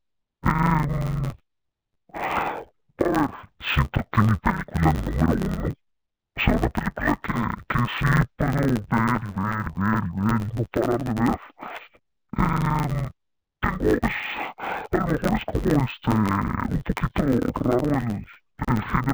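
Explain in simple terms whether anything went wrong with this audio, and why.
Something went wrong for the whole clip. The fault is interleaved audio read as planar. Stereo sound stores left and right samples in turns. Here the player took each block's first half as left and its second half as right. Each half then plays stretched to twice its length. The blocks are tiny, about 10.67 ms, which fits a 512-sample block. So the speech keeps its normal pace but sounds dull and robotic, with a steady buzz at about 93.8 Hz, the block rate.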